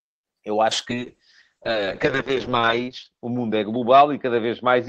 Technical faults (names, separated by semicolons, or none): call bitrate drop